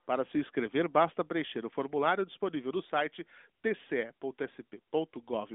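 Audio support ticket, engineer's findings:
No faults found; the speech sits on an AMR narrowband mobile codec path, band-limited as expected with nothing above 3.7 kHz and only light codec colouring.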